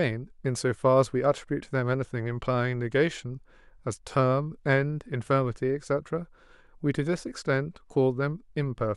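Nothing to flag: no audible faults anywhere in the speech.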